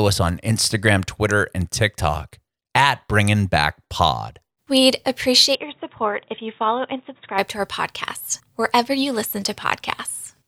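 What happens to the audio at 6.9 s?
Input switched to a poorer device, 5.55 to 7.38 s: likely a microphone change, leaving the speech dull, cut above 3.8 kHz, slightly quieter, with faint new noise.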